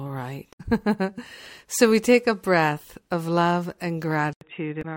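At 0.49 to 0.61 s there's a brief glitch where damaged data in the compressed stream throws the decoder off. It can't read those frames, loses sync and skips ahead to the next good header.

At 4.33 s the audio drops out for about 80 ms and comes back duller and boxier, with nothing above 3.8 kHz, a faint new noise floor well under the speech, and about the same level. That's likely the input switching to a poorer device, such as a headset call profile. Within that stretch, at 4.79 to 4.85 s, another burst of damaged data in the compressed stream produces a second short glitch.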